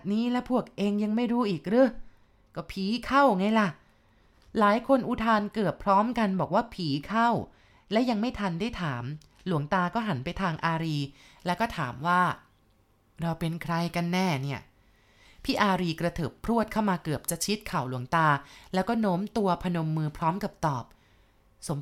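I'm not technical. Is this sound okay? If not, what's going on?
No. Pre-emphasis left on, from 10.83 s to the end: a treble boost meant to be undone later wasn't, so the speech turns thin, bright and hissy.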